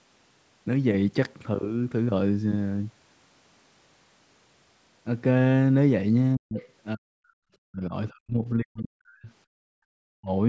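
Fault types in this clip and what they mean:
Speech suppressed in double talk, 6.36–6.57, 6.95–7.95, 8.11–9.29 and 10.03–10.31 s: the speech sinks deeply, likely the echo canceller turning down overlapping talk it mistook for echo.
Other side's voice leaking through, 6.58–6.66 s: a brief faint second voice, about 20 dB under the speech, likely loudspeaker echo the canceller left behind.
Background gated by the echo canceller, 9.57–9.75 s: the room sound drops by about 40 dB as the canceller clamps the microphone, then returns.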